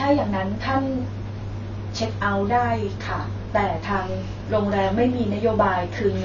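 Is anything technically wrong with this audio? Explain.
Yes. Throughout the speech, the sound is dull and smeared, with nothing above 6.9 kHz and a fizzy, warbling edge on sibilants. The likely cause is AAC compression: the encoder cut the top band and coarsely quantised the rest, which fits a bitrate near 24 kbps.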